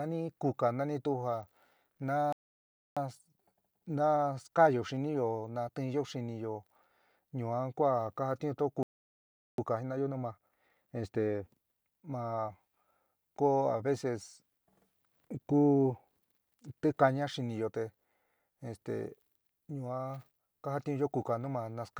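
At 2.33 s a playback stall interrupts the speech, most likely because the player ran out of buffered data or its output thread was held up. The sound cuts off mid-flow into about 0.64 s of silence, ending at 2.97 s. A second stall follows at 8.83 s, likely from the same starvation, silencing the output for about 0.75 s until 9.58 s.

Right after each stall, time-compressed catch-up sets in as the player works off its backlog by dropping short slices and cross-fading across the joins. From 2.97 to 5.97 s, and again from 9.58 to 12.58 s, the speech runs at 1.1 times normal speed. The pitch stays unchanged, so the speech sounds slightly hurried.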